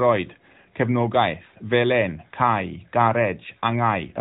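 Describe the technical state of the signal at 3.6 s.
At 3.6 s the speech is intact, with no fault present beyond the ordinary character of the AMR narrowband mobile codec it passes through.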